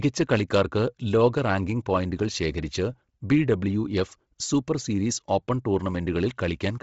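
Speech with Bluetooth LC3 compression throughout: nothing above 7.7 kHz, and heavy damage leaves the upper band breathy and grainy with noise fill, likely from a low-bitrate LE Audio link. Unlike a plain low-pass, the top sounds hissy rather than simply dull.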